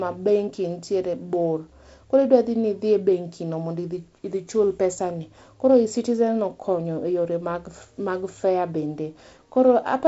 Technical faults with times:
none

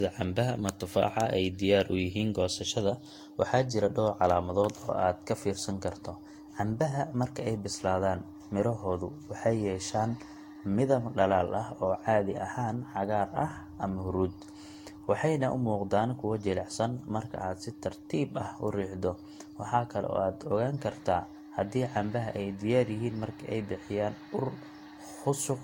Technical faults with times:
0.00-25.63 generation loss

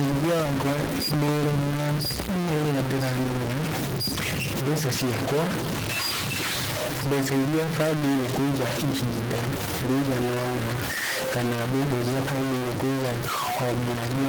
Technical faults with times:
0.00-14.28 stuck bit
0.00-14.28 Opus voice compression
0.09-2.81 train of clicks

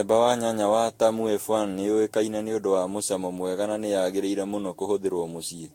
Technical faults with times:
0.00-5.75 generation loss

